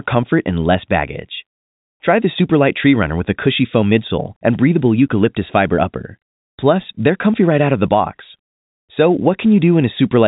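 No technical faults are audible.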